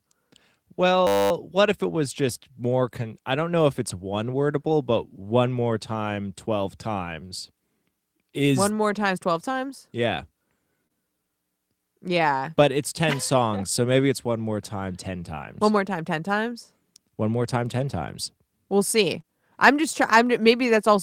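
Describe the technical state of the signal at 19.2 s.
A lost packet rebuilt from error correction occupies 19.18 to 19.20 s, just before "I'm just trying". About 20 ms of audio, which fits a single lost packet, was replaced by the low-bitrate copy carried in the following packet, so there is no gap, but that stretch sounds rougher and noisier.

Right after it, from 19.22 to 19.25 s, there is a short concealed packet loss, also just ahead of "I'm just trying". About 20 ms never arrived in time, and the decoder filled roughly 16 ms of it by extending the preceding sound before blending back, heard as a brief smear or wobble.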